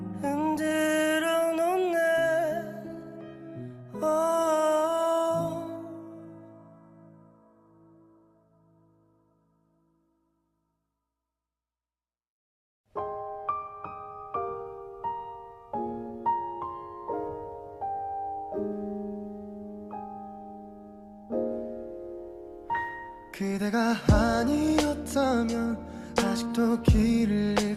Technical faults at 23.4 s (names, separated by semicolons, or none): none